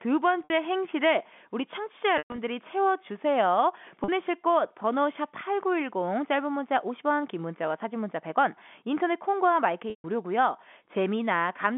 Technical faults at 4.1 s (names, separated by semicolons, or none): packet loss with pitch repetition